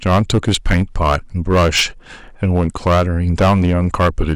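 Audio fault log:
Throughout: hard clipping. The speech drives a stage about 11 dB beyond what it can pass, so the peaks are sliced flat on roughly 7 percent of samples. Those squared tops throw harmonics high into the spectrum, heard as a harsh fuzz on every loud syllable.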